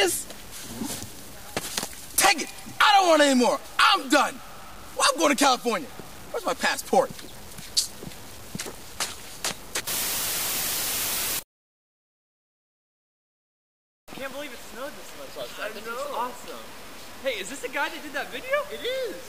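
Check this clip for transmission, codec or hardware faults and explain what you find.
A grainy, signal-following distortion runs through the whole clip, most likely from low bit depth without dither. The sound fits about 7 bits, truncated rather than rounded. The error sits only around 20 dB below the signal and tracks it, so quiet passages turn gritty and the faintest moments sputter or drop to silence. Dithered reduction would leave a steady hiss instead, and codec artefacts would swirl rather than crackle with the level.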